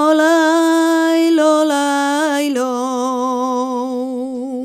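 No technical faults can be heard anywhere in the signal.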